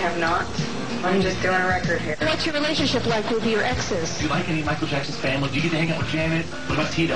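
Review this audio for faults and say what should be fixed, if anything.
At 5.88 s there is a momentary rough, grainy blip, a tiny smear of noise where the sound should continue cleanly. These are lost LE Audio frames: a single 10 ms Bluetooth LE Audio frame went missing, and the LC3 decoder filled the gap by replaying the previous frame's spectrum with randomised signs. That keeps the level steady but scrambles the phase, so the patch sounds noisy. The light lossy compression elsewhere is working normally. To prevent the dropout, improve the Bluetooth link margin by shortening the distance, reducing 2.4 GHz interference, or enabling retransmissions.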